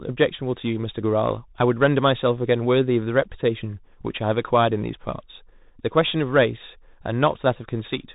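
Throughout the clip, the speech carries the Bluetooth CVSD headset codec's signature. Each one-bit up-or-down step adapts too slowly for fast changes, leaving plainly audible granular hiss and scratchy s sounds, consistent with a 64 kbps stream. Nothing above 3.8 kHz survives.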